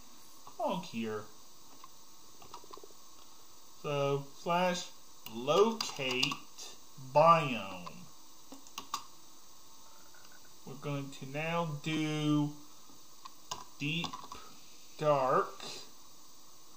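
At 11.97 s there is a dropped buffer (overrun), likely because roughly 15 ms of samples were overwritten before being read. The sound jumps forward with no silent gap, unlike a dropout.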